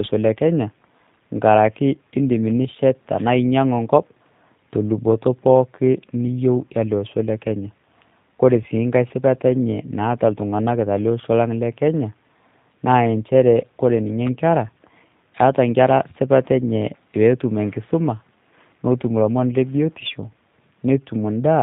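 From start to finish the speech carries plainly audible G.729 codec damage. Everything above 4 kHz is gone, and the speech has the slightly rough, synthetic edge of a model rebuilding it from a vocal tract filter, a pitch predictor and a few pulses per 10 ms frame. That modelled roughness, rather than a clean but muffled band limit, separates it from simple low-pass filtering, and the heavy reduction points to a rate near 8 kbit/s.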